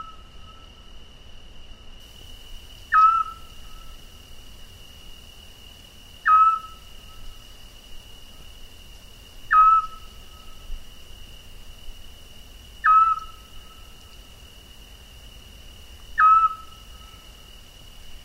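A recording of everyday sounds. For the first 2.0 s, a de-emphasis applied wrongly dulls the audio: the treble slopes smoothly away, ending about 10 dB lower at 10 kHz than at 1 kHz, so the opening sounds muffled. The treble cut was applied either where there was no pre-emphasis to undo or a second time. Compressed frames are skipped at 2.21, 6.75, 8.40 and 17.81 s. Each time the audio jumps ahead. The jumps are roughly 70, 20, 50 and 20 ms, which fits losing about three, one, two and one 24 ms frames.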